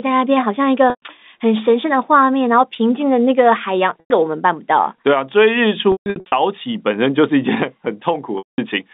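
Packet loss with pitch repetition hits the telephone-band speech at 0.9 s (120 ms), 4.0 s (100 ms), scattered across 5.92 to 6.32 s, and at 8.38 s (200 ms). The receiver loops the last pitch period, so the gaps sound like a held buzz, the longer ones fading to silence before the speech cross-fades back.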